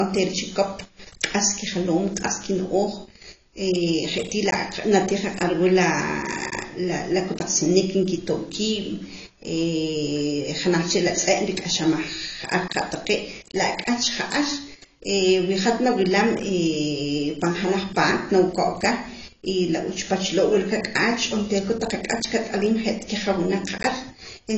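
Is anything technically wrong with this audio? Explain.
Yes. Throughout the speech, the sound is dull and smeared, with a warbling, fizzy texture on sibilants. It is likely AAC compression at a low bitrate. The encoder lowered its cut-off, so nothing remains above 7.9 kHz. A spectrogram would show a hard ceiling at 7.9 kHz.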